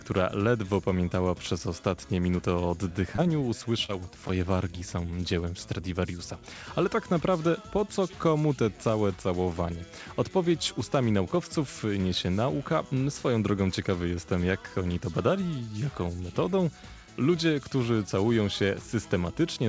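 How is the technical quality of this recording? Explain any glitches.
Three brief smears interrupt the sound within about a second, at 3.16–3.20 s, 3.86–3.93 s and 4.27–4.31 s, against a band-limited call sound with nothing above 8 kHz, which fits a G.722 path at 64 kbps. Each is a short concealed packet loss: about 20 ms of audio arrived too late, so the receiver stretched the preceding sound to cover the gap and faded back into real audio. The second one also drops about 10 ms outright.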